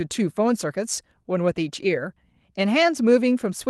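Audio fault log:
No faults found; the speech arrives over a WebRTC call path whose Opus coding tops out at 12 kHz.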